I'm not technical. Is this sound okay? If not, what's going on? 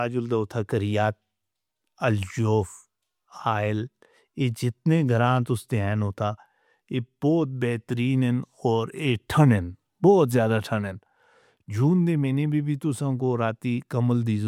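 Yes, this sound is okay, and there's nothing going on that needs fixing.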